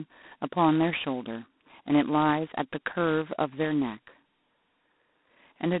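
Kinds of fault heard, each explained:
G.726 ADPCM: speech carries a harsh, rasping hiss tracking its level, with nothing above 3.9 kHz, from coarse adaptive difference coding consistent with 16 kbit/s.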